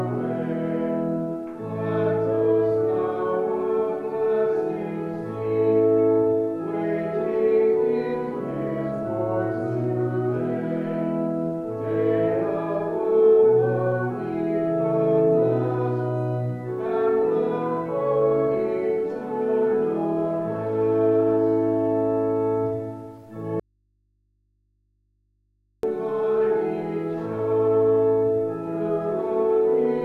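Audio dropout to a faint residue at 23.60 to 25.83 s: the sound abruptly vanishes, leaving only mains hum roughly 45 dB down, likely from a broken feed into a live input.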